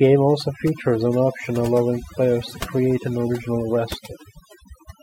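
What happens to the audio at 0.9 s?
At 0.9 s you're hearing overdone noise removal, present across the whole clip: bands near the noise floor get gated out, taking quiet parts of the voice with them and leaving twinkly near-silence.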